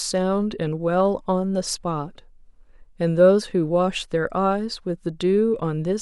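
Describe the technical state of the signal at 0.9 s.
At 0.9 s the signal is intact, with no audible technical fault at that point.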